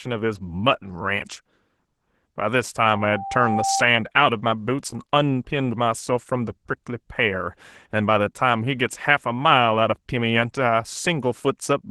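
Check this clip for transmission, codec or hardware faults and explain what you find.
Two faults are audible in this speech clip: codec damage throughout and a feedback squeal near the start.

Opus voice compression runs the whole way through. The speech is coded by SILK's linear-prediction core, with a CELT layer handling content above 8 kHz, at a low rate consistent with about 16 kbps in 20 ms frames. The coarse excitation coding makes the speech plainly hoarse, muffled and slightly robotic.

A loudspeaker feedback squeal runs from 2.78 to 3.88 s. The microphone picks up the loudspeaker it feeds, and at 783 Hz the loop gain exceeds one. That tone swells over roughly 0.7 s into a steady squeal about as loud as the speech, then stops.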